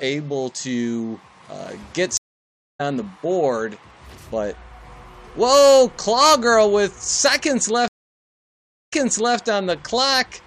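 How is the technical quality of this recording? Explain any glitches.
Two dropouts break up the recording, both from a stream reconnect. At 2.17 to 2.81 s the audio goes silent for about 0.62 s and comes back roughly half a second further on. At 7.88 to 9.38 s there's a 1.04 s gap, then it resumes 0.46 s earlier, so you hear a short stretch repeated. Each time the connection dropped, the player reconnected and started a fresh decoder mid-stream, which puts the audio back at a different point.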